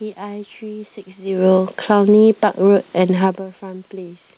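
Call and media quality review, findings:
Automatic gain falling, 1.75 to 2.39 s: level sags by about 5 dB over roughly 0.6 s, and the background room noise drops right along with it, which is the giveaway. AGC judged the input hot and eased its gain down gradually, not a talker or a mic issue. Whole mix dips together, so it's the gain stage.

Automatic gain rising, 2.29 to 2.88 s, overlapping the tail of the fall: the input drops hard, about 17 dB, and AGC claws back only about 4 dB over roughly 0.6 s. Background swells up with the voice as it recovers. Partial make-up, so that stretch stays noticeably quiet. Band-limited to 4 kHz throughout, which points to a narrowband G.711-style call path.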